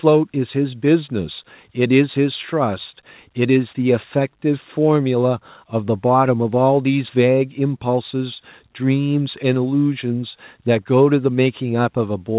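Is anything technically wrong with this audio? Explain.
No, nothing's wrong here: the speech just has the narrow, phone-like sound of a normal call, with nothing above 4 kHz, as you'd expect from a G.711 call path.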